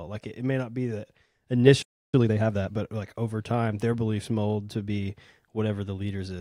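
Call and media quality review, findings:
Playback stall, 1.82–2.14 s: speech cuts out mid-flow for about 0.31 s, likely player buffer underrun or blocked audio thread; flat silent gap in waveform, blank spectrogram column.

Time-compressed catch-up, 2.14–2.74 s: speech hurried at 1.5x with unchanged pitch as the player trims backlog by splicing and cross-fading short segments; compressed syllables, harmonics at normal spacing.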